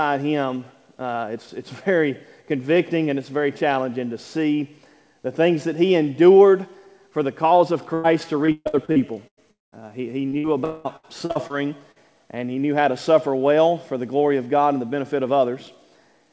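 At 7.94 s a burst of packet loss removes about 100 ms of audio. The last sound is stretched and faded to cover the hole, so a brief held buzz or hiss replaces it. The sound then resumes slightly further on.

From 8.46 to 9.39 s, repeated packet loss gives a robotic sound. Six gaps, the longest 137 ms, are each patched by repeating recent sound. About 40% of the stretch is filled this way, so it turns choppy.

At 9.51 s a long network dropout is the likely cause of a short fading tail and then about 190 ms of silence. Audio returns at 9.74 s, missing about 220 ms. From 10.64 to 10.87 s a second likely dropout loses about 200 ms, filled by a fading continuation instead of silence.

Short concealed packet loss appears around 10.3 to 10.47 s. Within it, a 60 ms burst of packet loss at 10.38 s adds a brief held buzz or hiss. Between 10.97 and 11.52 s, four more gaps, the longest 68 ms, make the sound robotic again. 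At 11.92 s another 40 ms hole leaves a small wobble. Throughout, the call path cuts everything above 8 kHz, which fits a wideband codec such as G.722 at 64 kbps.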